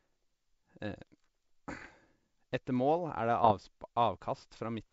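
Bit errors on an ADPCM link corrupt the speech from 1.80 to 1.90 s and again from 3.44 to 3.55 s, each with a rough, popping burst and brief level jumps. Each flipped bit in the G.722 stream knocks the decoder's step size and predictor off, so the damage rings on briefly. This fits an error rate well under one percent.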